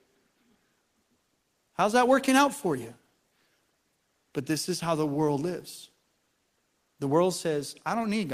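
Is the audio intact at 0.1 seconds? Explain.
Yes, the audio is intact at 0.1 seconds, with no fault audible at that moment.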